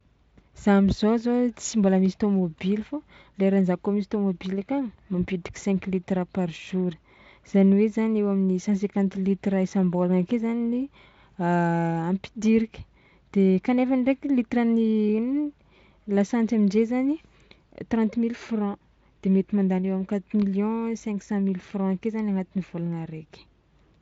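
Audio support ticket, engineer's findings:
Listened through the speech in full and nothing stood out; the Speex path is running at a high setting, with the audio band ending near 7.6 kHz.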